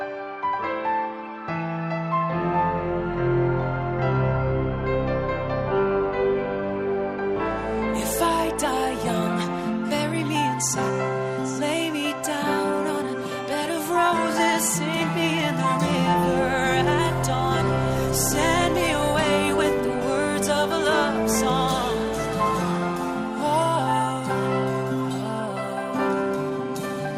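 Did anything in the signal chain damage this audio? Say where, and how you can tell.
Yes, at the codec stage: MP2 compression is audible throughout. The top end is dull, and a gurgling, granular grit runs under everything. This is likely a bit allocation too lean for its 32 sub-bands, with upper bands dropping in and out, which fits roughly 80 kbps.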